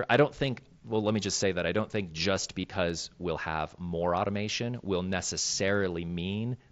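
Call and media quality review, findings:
Brief buzzy patch at 2.62 to 2.64 s, between "I don't think just" and "we'll have more automation": concealed Bluetooth headset packet loss. About 22 ms missing, fits roughly three dropped frames. Receiver repeated recent waveform over the gap, with a slight warble on recovery over the mSBC wideband link.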